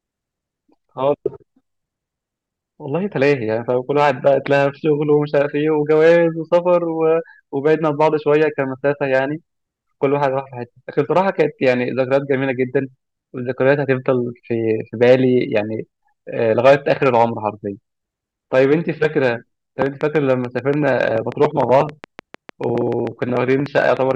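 From 19.86 s to 24.12 s, a train of clicks runs over the speech to the end of the clip. Some thirty short pulses arrive at a steady 6.8 per second. Each has much the same shape. They peak a little above the level of the speech itself, so they stand out clearly. The sound is an even ticking that continues through pauses as well. The likely cause is electrical interference or an interface briefly failing at a fixed rate.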